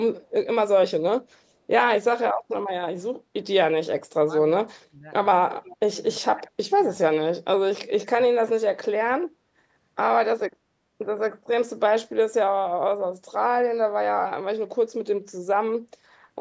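Between 4.65 and 5.08 s, an echo canceller likely faced double talk, with both ends speaking at once. Unable to tell the near talker from loudspeaker echo, it attenuated everything, so the speech suddenly sinks, by about 30 dB at its deepest. The same speech suppressed in double talk recurs at 5.71 to 5.96 s and 6.2 to 6.74 s as shallower dips of about 15 dB, then at 7.72 to 8.11 s and 8.27 to 9.07 s as deep losses of about 30 dB.

From 5.51 to 5.76 s there is an echo leak, likely from a loudspeaker end whose canceller let part of its microphone pickup slip back into the call. A faint copy of the speech, delayed by 344 ms and roughly 25 dB below the direct sound, trails behind it as a scrap. As this fades, the next suppression dip begins.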